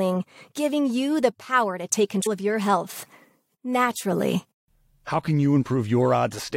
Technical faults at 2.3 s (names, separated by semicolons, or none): damaged data in a compressed stream